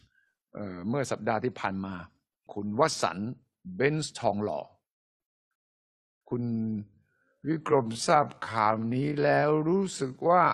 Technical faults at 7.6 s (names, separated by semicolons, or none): time-stretched section